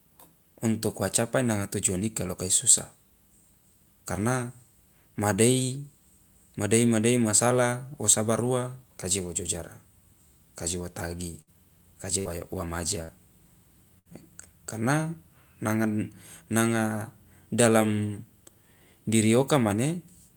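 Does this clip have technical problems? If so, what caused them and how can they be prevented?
Yes. A burst of packet loss occurs four times: at 11.41 s, just after "ka je wo tagi"; at 12.19 s, just before "yo wa"; at 13.03 s, right after "yo wa"; and at 13.99 s. Each time, a short run of packets arrived too late or not at all. The receiver held the last speech sound for roughly 55 to 66 ms, fading it into a buzz or hiss, then jumped ahead, so about 60 ms of speech is missing at each point. A more stable network connection, a larger adaptive jitter buffer, and forward error correction or redundant packets would prevent these dropouts.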